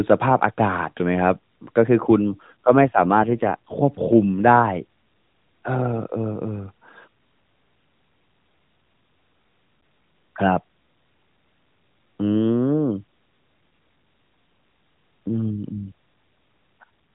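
From 2.32 to 3.74 s, an AMR rate drop makes the codec switch to a lower mode, which fits a fall from 12.2 to 5.9 kbps. The band stays the same with no gap, but the speech turns rougher and more synthetic. A brief repeat at 16.81 s does the same.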